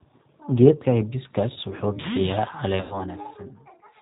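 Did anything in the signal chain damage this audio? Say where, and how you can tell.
Yes. A G.729 codec affects the whole clip at the codec stage, and it is plainly audible. Nothing reaches above 4 kHz, so the speech sounds band-limited and slightly rough and synthetic. The voice is rebuilt from a vocal tract filter, a pitch predictor and a sparse set of pulses in each 10 ms frame rather than being coded as a waveform. That coarse excitation gives the buzzy, artificial texture, which fits a low-rate codec around 8 kbit/s.

VoIP packet loss concealed by the speech codec is a network-stage fault, from 2.81 to 2.99 s. About 100 ms of audio went missing, which fits five 20 ms packets. The decoder filled the gap by repeating its last pitch and filter settings with falling gain, so the speech smears into a fading buzzy tone or coloured noise. Each frame builds on the previous one, so the damage lasts beyond the gap itself.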